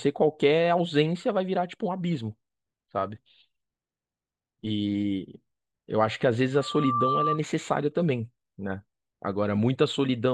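From 6.54 to 7.41 s, loudspeaker feedback squeal: the mic re-amplifies its own speaker, so a 1.2 kHz tone swells within roughly 0.4 s, showing as one bright horizontal spectrogram line.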